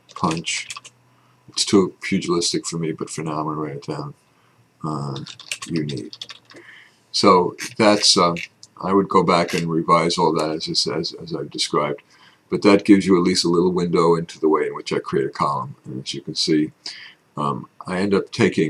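No audible technical faults.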